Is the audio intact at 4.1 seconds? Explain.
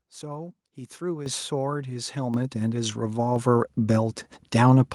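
Yes, the speech at 4.1 seconds is intact, with no audible fault at that moment.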